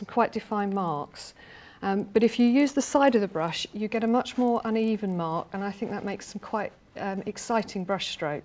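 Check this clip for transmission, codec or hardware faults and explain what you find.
One fault runs through the whole clip: a resampler restarted on every block. Each 40 ms block was converted separately, probably from 24 kHz down to 16 kHz, so every block edge carries a small error. The result is a steady 25 Hz ticking buzz that, unlike mains hum, stops whenever the sound goes quiet.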